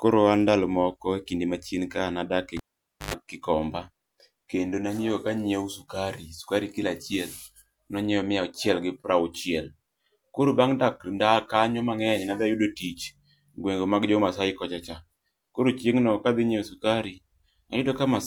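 A speech clip with a cable pulled and plugged in at 2.57 s, just after "ka nadak e". A pop cuts the sound to near silence for about 0.52 s. A 50 Hz mains buzz lasts about 0.11 s as the plug's tip touches. A second pop brings the sound back at 3.14 s.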